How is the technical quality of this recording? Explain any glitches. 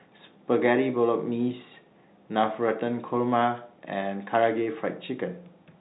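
Nothing here counts as a glitch: the speech comes over in the ordinary telephone format, so everything above about 3.9 kHz is simply gone, and apart from that narrow band there's no dropout, click or other fault to point to.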